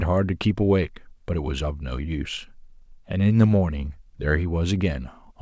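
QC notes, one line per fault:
Nothing stood out on listening to this speech clip.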